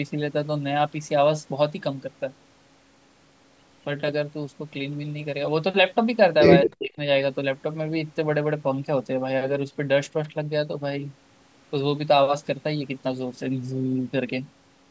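At 6.64 s a faint, delayed copy of the speech slips in and lasts until 6.70 s. It trails the original by about 222 ms and sits roughly 10 dB below it. It is brief and scrappy. This is an echo leak. The likely cause is a far-end loudspeaker whose echo canceller let part of the pickup through and sent it back down the line.

Overlapping it, from 6.65 s to 6.99 s, the speech sinks sharply. At its deepest it drops by around 40 dB, close to silence. About a third of a second is affected. This is speech suppressed in double talk. Both sides were likely talking at once, and the canceller could not tell the talker from the echo. It turned everything down together. The call's microphone processing shows only as a normal limit, with nothing above 8 kHz.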